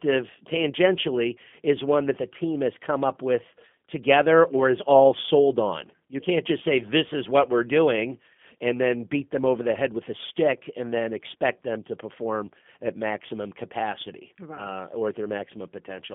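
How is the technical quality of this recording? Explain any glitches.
The recording is intelligible but clearly degraded by a low-rate speech codec throughout.

For the full length of the speech, the G.729 codec damage is plainly audible. The sound is confined to a telephone band of roughly 150 Hz to 3.4 kHz, with nothing above 3.6 kHz. The codec rebuilds each 10 ms frame from a vocal-tract filter, a pitch predictor and a few pulses, which fits G.729A at 8 kbit/s. That reconstruction gives the speech a slightly rough, synthetic texture. Simple telephone-band filtering would sound muffled but smooth, so this roughness is what marks it as codec damage.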